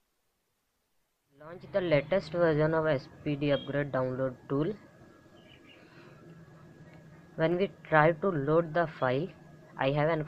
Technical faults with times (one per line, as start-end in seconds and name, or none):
7.52 dropped samples